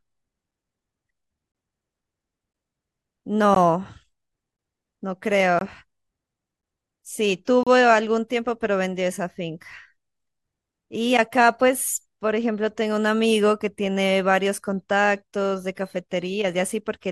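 Speech, broken by three short silent holes with hard edges. This is a gap between stream segments. The first falls at 3.55 s and lasts about 17 ms. The second runs from 5.59 to 5.61 s, about 21 ms. The third runs from 7.63 to 7.67 s, about 33 ms. They sit roughly 2 s apart, on the boundaries of 1 s segments. The segment time stamps leave a small gap, and the player fills it with silence. No audio is lost.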